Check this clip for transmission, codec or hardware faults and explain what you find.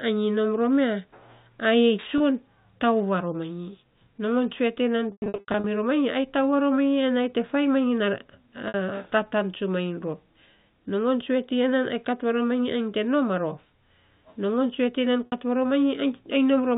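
Packet loss with pitch repetition occurs four times: 2.18–2.20 s, 5.12–5.64 s, 8.68–8.74 s and 15.26–15.32 s. Each gap is filled by looping the last pitch period. The 20 ms and 60 ms losses sound like a briefly held, buzzy tone. At 5.12 s, 340 ms are lost in scattered runs of up to 100 ms, so the sound fades toward silence in the longest run before cross-fading back. All of this rides on a band-limited G.711 A-law telephone path.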